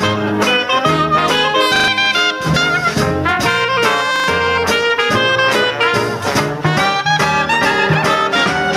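Gain pumping runs through the whole clip: loud and soft parts sit closer in level and the sound is squashed, a level swing of about 10 dB. This is likely from the input gain set far too high, with a fast limiter clamping down on every peak.

Repeated buffer at 1.76 to 1.88 s and again at 4.16 to 4.28 s: fresh audio arrived late, so the same short slice plays three extra times with hard joins. The result is a stutter that fits a 40 ms buffer, and around a tenth of a second of real sound is lost.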